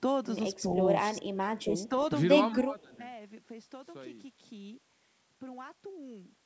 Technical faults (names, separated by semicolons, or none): echo leak; speech suppressed in double talk